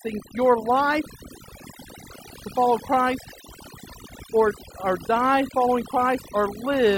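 A speech recording with overdone noise removal throughout: the background drops and breaks up into twinkling, warbling specks. A noise gate would instead mute whole passages at once.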